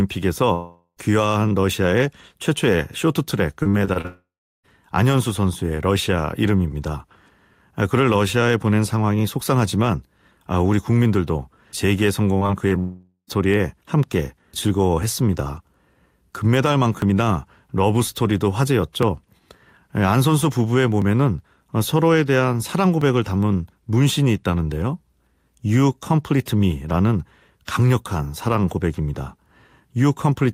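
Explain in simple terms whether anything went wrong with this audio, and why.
Three times the sound trails off into a fading buzz and then briefly goes quiet before returning with a piece missing: from 0.53 to 0.99 s, from 4.06 to 4.66 s, and from 12.79 to 13.30 s. Each is a long network dropout, most likely half a second of audio that never arrived, which the receiver papered over until it ran out.

Just before the second of those, from 3.63 to 4.06 s, the speech turns choppy and robotic. This is repeated packet loss: five small holes, the longest 40 ms, each filled by stretching the last sound, with roughly a third of that stretch patched this way.

At 12.69 to 12.73 s there is a quick smear or wobble. That is short concealed packet loss, where a 20 ms scrap went missing and the receiver smoothly guessed its way across it.

From 15.0 to 25.0 s a tick comes every 2 s, about seven in all. 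These are periodic USB or driver dropouts: something on the recording computer stalls the audio at a steady rhythm, and about 2 ms is skipped each time.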